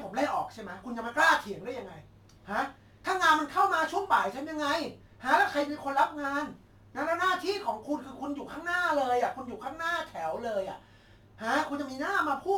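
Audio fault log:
throughout crude rate conversion: a gritty, inharmonic fizz trails louder, brighter speech at about 25 dB down, which fits 48 kHz audio cut to 44.1 kHz by dropping samples unfiltered.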